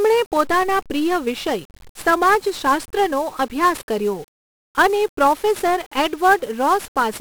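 From the first moment to the last, the speech is smothered in the grit of 1-bit DFPWM compression. Each sample carries just one bit, nudging an adaptive level up or down, so the waveform only ever approximates itself in little steps. That leaves a heavy, broadband fuzz riding on everything, with crackle throughout and the upper consonants sunk under hiss. The damage is heavy, which fits a low-rate stream of around 48 kbps.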